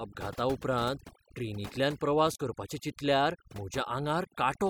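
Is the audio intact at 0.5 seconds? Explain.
No. At 0.5 seconds the speech is affected by overdone noise removal, which runs through the whole clip. The noise reduction was set too aggressively, cutting frequency bands that sit near its noise estimate, so the background drops and breaks up into twinkling specks while quieter parts of the voice are stripped away.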